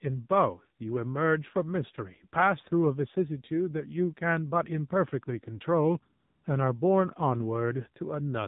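AMR narrowband mobile codec damage runs throughout the speech. The band stops sharply at 4 kHz, and each 20 ms frame is rebuilt from a vocal-tract model driven by sparse pulses. At this plainly audible level, the buzzy, synthetic tone fits a low mode near 7.4 kbps.

AMR comfort noise appears from 6.20 to 6.44 s. The sender judged the talker silent and stopped sending speech frames for 240 ms, so the receiver filled the gap with smooth synthetic noise. That noise switches in and out abruptly in place of the real background.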